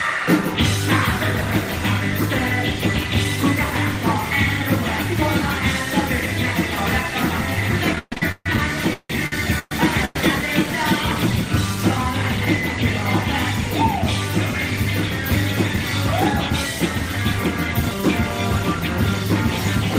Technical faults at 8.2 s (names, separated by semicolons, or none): repeated stalls (stutter)